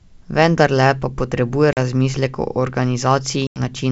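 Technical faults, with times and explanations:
1.73–1.78 s and 3.47–3.60 s, packet loss on an ADPCM call: about 40 ms between "pa potrebuje" and "razmislek o", then about 90 ms (roughly ten packets), drop to hard-edged silence. The G.722 decoder's predictor and step size lose track of the sender's, so the speech resumes slightly distorted before settling.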